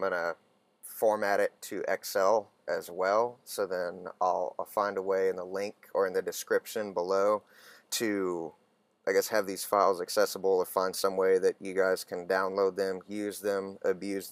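No technical faults are audible.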